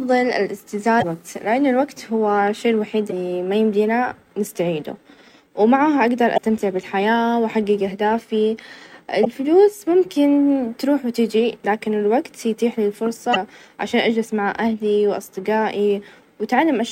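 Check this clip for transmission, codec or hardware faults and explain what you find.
One fault recurs: damaged data in a compressed stream, heard five times at 0.98–1.04, 3.07–3.13, 6.34–6.39, 9.21–9.27 and 13.31–13.37 s. Each is a brief chirp or squawk of about 55 ms cutting into the speech. Corrupted bytes in the stream make the decoder misread those frames, lose sync and search for the next valid frame header, and the garbled output during that search is the blip.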